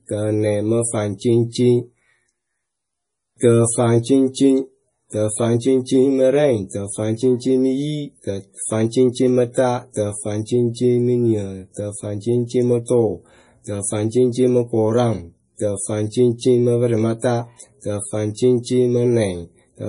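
From start to finish the speech carries heavy damage that is likely MP3 compression. Nothing remains above 10.6 kHz, so the top end sounds dull and boxed in. The encoder seems starved of bits, which fits a low bitrate of around 32 kbps. Weak frequency detail is dropped and returns unevenly from frame to frame. That gives the audio a watery, swirling texture. S sounds turn metallic and chirpy. Sharp onsets come out smeared.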